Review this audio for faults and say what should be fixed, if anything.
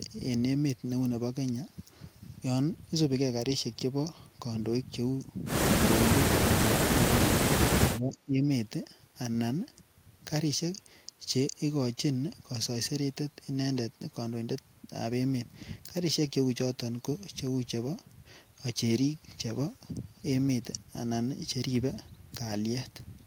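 From 7.98 to 8.43 s the speech dips by about 15 dB, losing about 0.4 s in total. This is speech suppressed in double talk, likely the echo canceller treating overlapping far-end audio as echo and attenuating both. Tuning the double-talk detector to hold near-end speech during overlap would prevent it.

Between 8.13 and 8.18 s a faint delayed copy of the speech appears, around 25 dB below the main signal and trailing by 440 ms. This is echo leak, likely residual loudspeaker pickup the far-end canceller failed to remove. Better acoustic isolation or a longer canceller filter covering that delay would prevent it.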